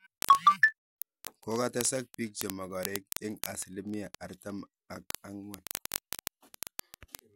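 From 0.12 s to the end, word clock ticks run through the speech roughly every 20 ms, hundreds of sharp clicks of uneven strength. The receiving clock drifts about a tenth of a percent from the sender's, dropping or repeating one sample each slip. A spectrogram shows evenly spaced thin vertical lines.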